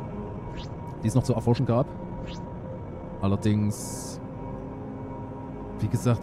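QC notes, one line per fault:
0.0–3.82 s, time-stretched section: the opening plays about 1.48 times faster while its pitch holds steady, then the pace drops abruptly to normal at 3.82 s. It sounds rushed because short pieces were cut out to shorten the span, likely by pitch-preserving stretch software. On a spectrogram, harmonic bands keep their height but events crowd together horizontally; the waveform shows compressed envelopes with small splice discontinuities.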